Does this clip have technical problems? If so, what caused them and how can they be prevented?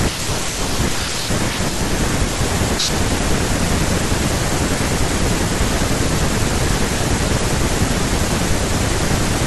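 No, the recording shows no technical problems.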